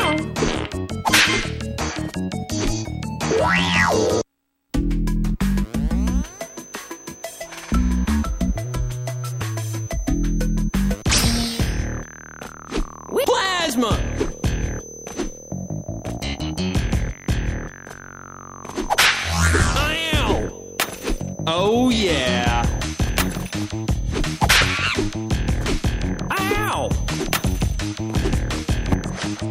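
A feedback whistle starts at 5.90 s and runs to the end: a thin, steady tone near 6.1 kHz, sitting roughly 25 dB below the sound and swelling and fading slowly in level. It is likely a loudspeaker-to-microphone loop held just at the edge of feedback, sustaining one frequency without building further.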